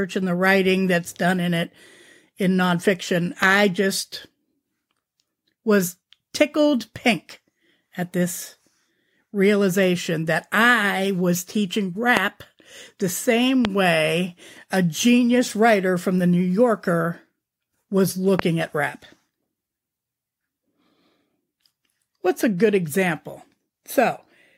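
A sharp single pop cuts through the speech at 3.43 to 3.45 s, again at 12.17 to 12.19 s, at 13.65 to 13.67 s and at 18.39 to 18.41 s. Each is a brief click-like thump that jumps well above the speech while the talking carries on beneath it. These are loud pops, each most likely a sudden voltage spike from static, a switch or a driver glitch that was added to the signal and shaped by the circuitry downstream.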